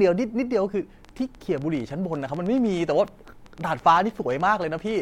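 From 1.05 s to 4.96 s the speech carries a train of clicks, about forty sharp pops arriving at an uneven pace of roughly 10.7 per second. They sit over the speech and in its pauses, and reach about the level of the speech itself. This is likely interference from nearby equipment or a faulty connection or power supply. A waveform shows narrow, similar spikes at irregular spacing, and a spectrogram shows thin full-height vertical lines.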